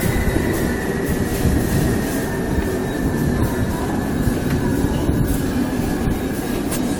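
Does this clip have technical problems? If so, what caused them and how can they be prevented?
Yes. Throughout the sounds there is a swirly, watery smear, with a hollow character and blurred attacks, more degraded than a single moderate-bitrate encode would leave. This is generation loss, likely from the audio being decoded and re-encoded with AAC-LC about five times, at a rate that fits 96 kbit/s. Each pass requantised the audio on a shifted frame grid, so noise built up pass after pass. To prevent it, keep a lossless master for all editing and encode to a lossy format only once, at the final step.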